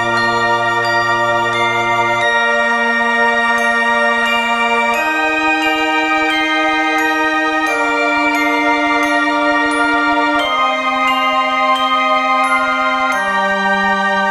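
A recording of sounds with a filter restarted on every block throughout: each block opens with a small transient, giving a steady 21.5 Hz buzz, which fits a 2048-sample block. Unlike underrun clicks, the ticks are perfectly regular and grow and fade with the sound's level.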